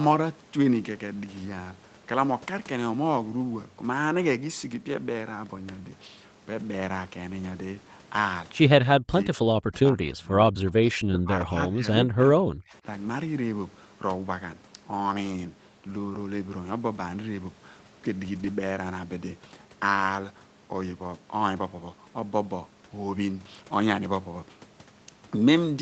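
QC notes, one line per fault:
6.59–6.61 s, 10.99–11.13 s, 15.89–15.91 s, 18.35–18.45 s: lost packet rebuilt from error correction. There is no dropout at these points. Instead, short stretches of roughly 20 ms, 80 ms, 20 ms and 60 ms sound grainier and noisier than the audio around them. The decoder filled each gap from the low-bitrate redundant copy carried in the following Opus packet. The 80 ms and 60 ms patches fit four and three separate lost 20 ms packets.
8.81–9.37 s, 9.63–9.75 s, 9.92–12.85 s: speech suppressed in double talk. The talker's level drops sharply and in pieces, by about 40 dB at the start, about 25 dB in the short middle dip, and about 30 dB across the longest span. Roughly 300 ms, 100 ms and 2 s are pulled down in total. This is likely the echo canceller clamping both sides while the far end was also speaking.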